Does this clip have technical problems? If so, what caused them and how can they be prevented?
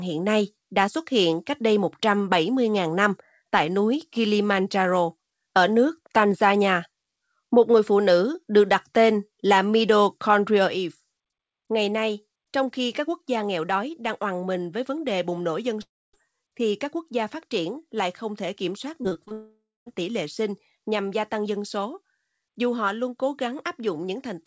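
Yes. One channel drops out from 10.68 s to the end of the clip. From that point the sound shared by both channels falls abruptly by about 6 dB, and anything carried only in the lost side disappears. This is likely a stereo source where one channel stopped delivering signal and the mono sum was left with only half its input. Monitoring both channel meters during capture and fixing a failing cable, input or device routing would prevent this.

A long network dropout occurs at 15.82 to 16.15 s and again at 19.33 to 19.88 s. In each, the receiver stretches the last sound into a fading buzz or hiss before it gives way to silence, about 0.26 s in the first and about 0.23 s in the second. The speech then resumes with that stretch missing. This is likely a connection that stopped delivering audio packets altogether. A more stable network path, such as wired rather than wireless, with less competing traffic, would prevent it.

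Repeated packet loss (robotic sound) runs from 19.03 to 19.33 s, just before the second dropout. Five short holes appear within 0.3 s, the longest 24 ms, and about a third of that span is patched by continuing the previous sound. The result is choppy, with small pieces missing. A steadier connection and a jitter buffer with enough headroom to absorb late packets would prevent this. Throughout the clip, the call path limits the band, with nothing above 8 kHz, which fits G.722.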